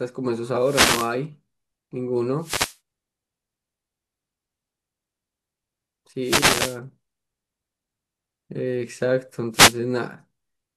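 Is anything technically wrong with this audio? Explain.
Yes. The clip has four wireless microphone noise hits, at 0.58 to 1.16 s, 2.38 to 2.78 s, 6.22 to 6.79 s and 9.52 to 9.76 s. Each time, the analogue FM radio link from the microphone weakens as reflected copies of the signal arrive out of phase and cancel at the receiver. With less signal to capture, the receiver's own noise rises into the output, heard as a short burst of swishing static.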